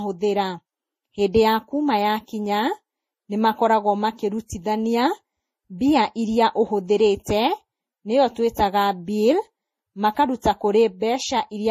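Throughout the speech, nothing reaches above about 15.2 kHz, and smeared, watery artefacts layer together. This likely reflects transcoding between lossy codecs, consistent with low-bitrate MP3 re-encoded to Vorbis.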